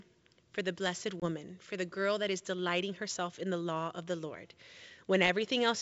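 At 1.20 s a single lost packet leaves a hard-edged 20 ms silence: packet loss on an ADPCM call. The decoder's predictor and step size fall out of step with the sender's, so speech returns with brief, slight distortion, settling by 1.26 s.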